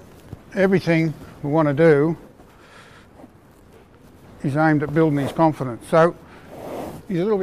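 No technical fault can be heard anywhere in the audio, with nothing disturbing the signal at any point.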